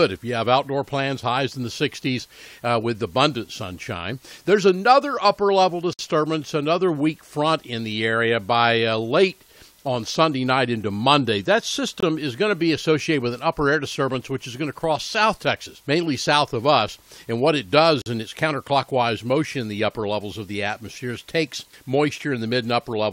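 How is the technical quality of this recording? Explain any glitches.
The recording has three short dropouts from gaps between stream segments. They occur at 5.93 to 5.99 s, 12.00 to 12.03 s, and 18.02 to 18.06 s, spaced about 6 s apart. That regular spacing matches 6-second segments. At each boundary, the timestamps leave a small hole, and the player fills it with silence. The holes add about 56, 22 and 45 ms. Each one is a hard-edged break, and the sound resumes intact.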